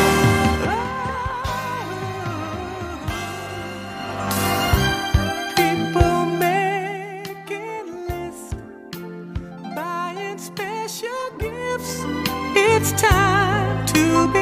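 Between 11.61 and 12.07 s, a level change is applied in coarse 2 dB jumps, with no smoothing between them. This is zipper noise. The gain moves through roughly 10 dB in about ten steps per second, and each abrupt jump puts a small discontinuity into the waveform. The result is a quick ticking or zipping riding on the sound while the level moves.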